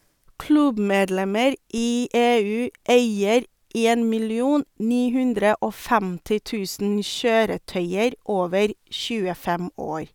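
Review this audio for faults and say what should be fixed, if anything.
A DC step occurs at 1.78 s: the waveform's zero line jumps abruptly by about -31 dBFS, and the shift then drains away rather than holding, decaying as a 5 Hz high-pass would let it settle. The sudden offset change is heard as a single low thump under the speech, which carries on unaffected. A jump like this is what happens when a converter recalibrates mid-stream or an input carrying its own offset is switched into the path. To prevent it, avoid switching inputs or triggering recalibration during capture, and block DC ahead of the converter.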